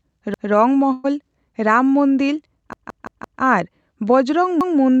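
At 0.34 to 0.51 s, a short stretch of audio plays twice in a row with a hard join between the copies, a brief stutter. This is a repeated buffer. Fresh audio did not reach the output in time, so the device replayed the last block it held. Each repeated block lasts about 0.17 s, which fits an 8192-sample buffer, and little or nothing of the original sound seems to be skipped.

From 0.92 to 1.06 s the sound stretches out and fades instead of moving on. It then picks up further along with roughly 120 ms missing. This is a burst of packet loss on the call path. Several consecutive packets never arrived in time, so the receiver spent about 113 ms extending and softening the last sound it had before resuming.

The repeated buffer comes back more severely at 2.73 to 3.41 s. The same 0.17 s block plays five times in total, giving a longer stutter with a hard seam at every repeat.

A final repeated buffer at 4.61 to 4.78 s is a single extra play, a brief stutter like the first one.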